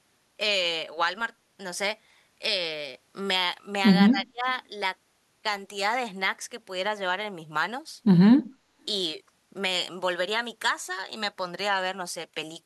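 Speech whose level drops by roughly 30 dB between 4.09 and 4.46 s, a clear notch in the waveform and spectrogram, likely from speech suppressed in double talk.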